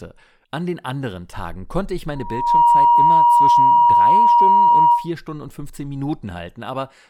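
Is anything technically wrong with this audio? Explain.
Yes. Loudspeaker feedback squeals from 2.15 to 5.11 s: a microphone picks up its own loudspeaker, and at 952 Hz the loop gain exceeds one. That tone swells within about half a second into a steady squeal roughly 15 dB above the speech.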